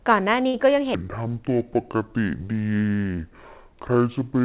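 A burst of packet loss at 0.48 to 0.55 s interrupts this speech recording. Roughly 55 ms is bridged by the receiver extending the last sound into a fading buzz or hiss, and when the audio returns about 60 ms of the original is simply gone. A section at the wrong speed runs from 0.95 s to the end: playback drops to 0.58 times normal, so the voice sounds slowed and about ten semitones deeper, with pitch and tempo falling together. The likely cause is a stretch being played against the wrong clock. A short concealed packet loss at 3.14 to 3.19 s leaves a brief smear, where about 39 ms of synthesized continuation covers roughly 40 ms that never arrived in time before the real signal blends back in. Throughout, the band stops at 4 kHz, which fits a narrowband telephone codec such as G.711.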